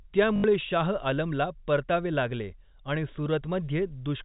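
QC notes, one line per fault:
0.36–0.44 s, packet loss with last packet repeated: about 80 ms lost and the last chunk looped, which fits four 20 ms packets, so it buzzes at 50 Hz.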